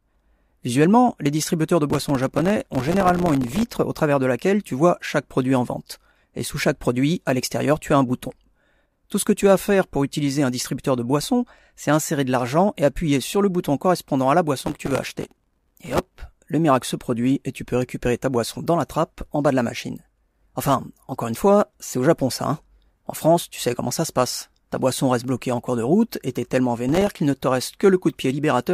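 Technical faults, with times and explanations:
1.90–3.72 s, 14.57–16.20 s and 26.89–27.19 s, processor overload crackle: gritty tearing crackle rides on the speech, first after "les distributeurs de", then after "bouton correspondant à la", then briefly after "route et t'es tellement". The processor repeatedly failed to finish its tiny audio buffers on time, and each miss dropped in a hard-edged sliver of silence. The very fine grain of the crackle fits buffers of only a millisecond or two.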